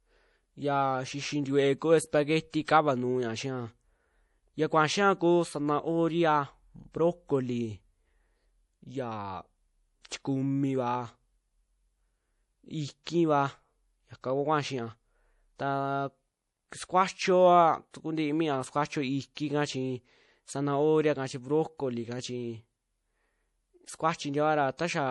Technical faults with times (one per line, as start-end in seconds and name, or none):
0.00-25.10 MP3 compression